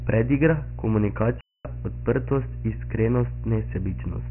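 Mains hum runs from the start: a steady 60 Hz tone, strong at roughly 10 dB below the speech, from power-line coupling such as a ground loop.

Dialogic VOX ADPCM also runs throughout: 4-bit coding leaves gritty hiss trailing the speech and nothing above 3 kHz, which fits 6,000 samples a second. The damage is heavy.

An unstable filter strikes from 1.25 to 1.65 s. A recursive filter's output runs away, swelling over 0.16 s into a loud squeal near 5 kHz, then cutting to 0.24 s of silence.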